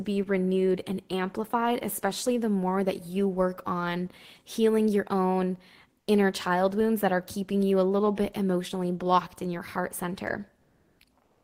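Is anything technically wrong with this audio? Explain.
Yes. From 10.61 to 10.99 s and from 11.23 s to the end, comfort noise takes the place of the background. The likely cause is Opus discontinuous transmission: the sender pauses and the receiver synthesises a steady, featureless hiss, shifting the level by about 3 dB, then about 1 dB. A gate would leave silence instead.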